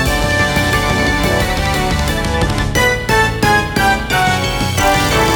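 A train of clicks runs from 4.00 s to 5.31 s: around ten similar sharp pulses at an uneven spacing, averaging about 7.7 per second, each poking a few dB above the surrounding sound. Because the pulses share the same shape and keep arriving regardless of the programme, they sit on top of it as a ragged ticking, audible in quieter moments too. The likely source is electrical interference from nearby equipment or a faulty connection or power supply injecting repeated spikes.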